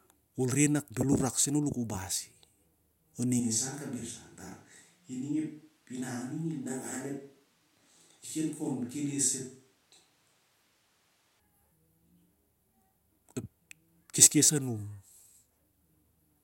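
Speech, and from 3.4 s to 11.4 s it abruptly turns roomy, hollow and thinner, dropping about 5 dB with faint room noise appearing. That points to a likely switch to a distant microphone; unlike added reverb, the tone, level and noise all change together, instantly, both ways.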